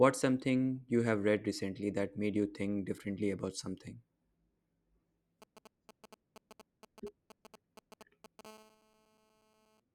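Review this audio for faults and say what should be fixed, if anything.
From 5.42 s to 8.41 s, GSM signalling bursts from a nearby 2G phone break into the speech as a galloping dit-dit-dit of short 217 Hz buzzes, roughly 20 dB below the speech. The phone is exchanging brief control transmissions with the network, and the audio circuitry rectifies each radio burst into sound. On a spectrogram, these appear as clusters of vertical stripes with a comb of 217 Hz harmonics. The waveform shows short packets of spiky pulses. Keeping phones well away from microphones, cables and preamps, or switching them to flight mode, prevents this.

From 8.45 s to 9.80 s, a GSM phone buzz takes over once the phone is in a call. It is a steady, raspy 217 Hz tone with many harmonics, about 28 dB below the speech and unrelated to it. The handset transmits continuously at 217 bursts per second, and the audio circuit rectifies that pulse train. 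A spectrogram shows evenly spaced horizontal lines at multiples of 217 Hz across the full band. The waveform carries a regular pulse train beneath the speech. Shielded, balanced cabling with RF filtering on the inputs, plus distance from any active phone, would prevent it.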